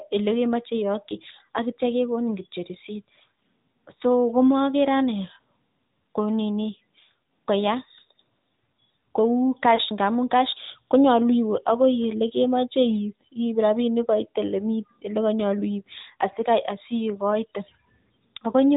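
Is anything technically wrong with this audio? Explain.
Yes, two problems. Throughout, the speech carries AMR narrowband mobile codec coding. Nothing passes above 4 kHz, and a hard ceiling shows on the spectrogram. Low-bit pulse modelling makes the voice plainly buzzy and synthetic, which fits a mid-range rate near 10.2 kbps.

Between about 9.76 and 9.80 s, a lost AMR speech frame leaves a brief dip or warble. The decoder repeats its last pitch and vocal-tract settings at falling gain, so the waveform shows a short amplitude sag.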